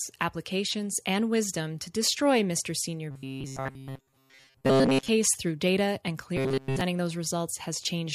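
From 3.11 to 5.08 s, just before "through data and", and again from 6.37 to 6.81 s right after "through data and", the speech becomes a rigid metallic buzz locked at 134 Hz. This is robotic sound from repeated short buffers, likely a 7.5 ms slice looped in place while most of the real audio is skipped.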